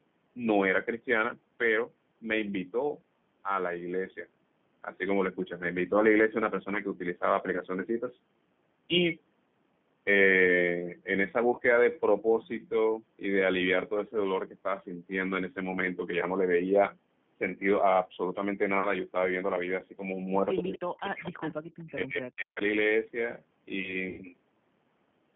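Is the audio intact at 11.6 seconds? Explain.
No. From 11.55 to 11.62 s there is VoIP packet loss concealed by the speech codec. About 30 ms of audio, which fits one lost packet, went missing. The decoder filled it by repeating its last pitch and filter at falling gain, producing a brief buzzy tone or coloured noise that fades. On a waveform this appears as near-identical repeating cycles shrinking in amplitude. On a spectrogram the harmonics run flat and dim instead of moving.

The moment also carries the G.729 codec damage present throughout. The 8 kbit/s coding confines the sound to about 150 Hz to 3.5 kHz and plainly roughens it with a synthetic edge. A spectrogram shows a hard ceiling at 3.5 kHz with smeared, grainy harmonic detail below it.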